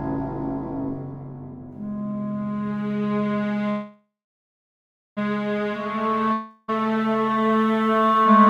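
It's a music clip with two network problems. First, a call audio freeze from 3.69 to 5.19 s: the last sound is stretched into a fading buzz or hiss, then about 1.07 s of near-silence, and the music picks up right where it stopped with nothing skipped. That whole 1.47 s is simply inserted, so everything after runs late. The likely cause is packets getting held up in transit until the jitter buffer ran dry. Then there's a long network dropout from 6.33 to 6.70 s: the receiver fills roughly 0.35 s with a fading continuation of the last sound, never dropping to silence, and when the music returns about 0.36 s of it has gone missing, so it jumps ahead. Here the likely cause is that packets never arrived at all, so that stretch couldn't be played.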